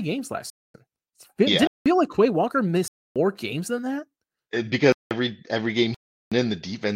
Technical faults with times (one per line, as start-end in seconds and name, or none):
0.50-0.74 block of digital silence
1.67-1.86 block of digital silence
2.88-3.16 block of digital silence
4.92-5.11 block of digital silence
5.94-6.32 block of digital silence